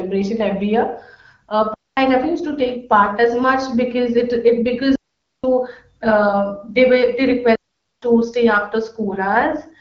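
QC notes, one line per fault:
1.74 to 8.02 s, digital wireless dropout: The speech cuts to near silence three times, at 1.74 to 1.97 s, 4.95 to 5.44 s and 7.55 to 8.02 s. The holes last about 230 ms, 480 ms and 470 ms. Each edge is a very fast fade, with no noise burst either side. The radio link lost too much data, so the receiver muted rather than play corrupt audio. The light HD Voice coding texture sits under the speech around these gaps.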